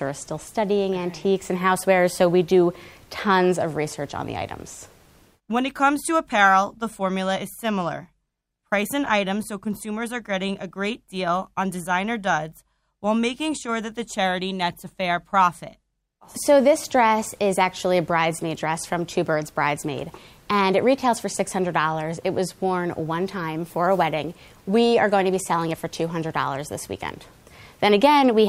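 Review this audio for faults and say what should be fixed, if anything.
Nothing here needs fixing, since no faults turn up anywhere in the recording.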